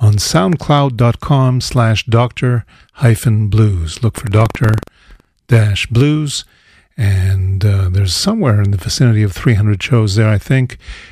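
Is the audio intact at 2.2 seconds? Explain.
Yes, at 2.2 seconds the speech plays through intact, with no dropout, click, distortion or other fault at that moment.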